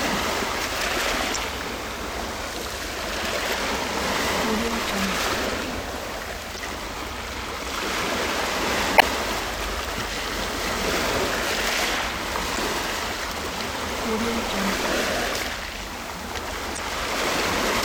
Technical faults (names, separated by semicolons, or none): damaged data in a compressed stream